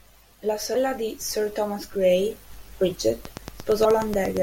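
At 0.75 s there is damaged data in a compressed stream: a brief disruption as the decoder misreads corrupted frames, loses sync and hunts for the next frame header. The same short blip recurs at 3.84 s.

From 3.25 s to 4.38 s a train of clicks runs over the sound: about fifteen similar pulses at a regular 8.55 per second, peaking about 10 dB above the speech, with the likely cause being interference from nearby equipment or a faulty connection or power supply.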